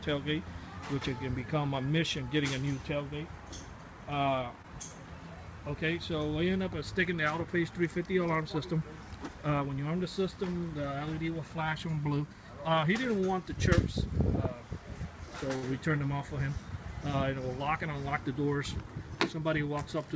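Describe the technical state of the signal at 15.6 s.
At 15.56 to 15.65 s there is a short stall from a late packet: the jitter buffer ran dry, so the receiver stretched the last sound for about 69 ms, then resumed without loss. It sounds like a held sound with a slight buzz or dip. A spectrogram shows horizontally smeared, repeating bands, and the waveform shows a periodic stretch, all under the G.722 path's 8 kHz ceiling.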